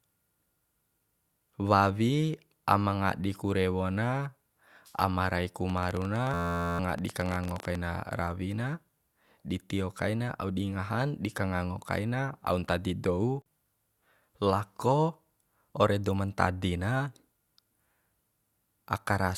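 From 5.70 to 7.76 s a train of clicks, roughly forty uneven pops at about 16.5 per second and some 10 dB above the speech, likely from electrical interference ticking over the sound. Inside that stretch, from 6.34 to 6.79 s, a system hang loop repeats one 11.61 ms slice 39 times. That makes a steady 86.1 Hz buzz rather than separate pops, consistent with a stalled 512-sample buffer, and loses about half a second of speech.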